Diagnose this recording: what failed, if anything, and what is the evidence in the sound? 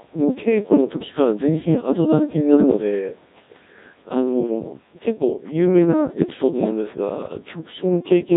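The whole recording has been through the Codec 2 vocoder at a very low rate, about 1.6 kbit/s, so this is a codec-stage failure. The speech sounds heavily damaged: robotic, buzzy, with a synthetic sheen on every syllable. That's because the decoder isn't rebuilding the original waveform at all. It resynthesises the voice from sine waves using only transmitted pitch, voicing, energy and a rough spectral envelope.

There's also a short burst of bit errors on digital voice radio at 4.45 to 4.51 s, where the voice briefly jumps in pitch, level and timbre into a warbly, garbled blip. At this bitrate every bit steers a whole frame's parameters, so flipping a fair share of them, around 7 percent, scrambles that instant. The 64 ms length points to a single corrupted vocoder frame, which is typical of a weak-signal link at the edge of coverage.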